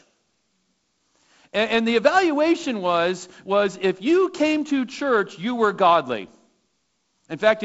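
No faults are audible anywhere in this speech recording.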